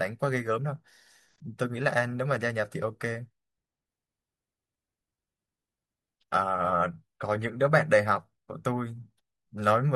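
From 3.86 to 7.86 s, an adaptive stream at a lower bitrate after a slowdown: treble turns synthetic, spectrogram upper bands abruptly thin and smear.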